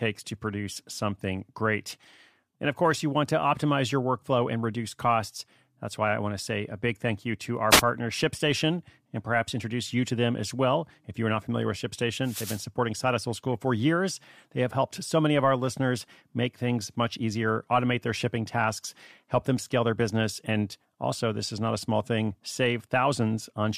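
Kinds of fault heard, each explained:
Wireless microphone noise hit: the radio link from an analogue FM microphone transmitter weakens when reflected signal paths cancel the direct one, and the receiver's own noise rises into the demodulated audio as a swish of static. It happens twice in this speech. A brief burst of about 0.12 s comes at 7.70 s, just after "thank you to our". A longer one of about 0.41 s runs from 12.22 s, right after "are not familiar with".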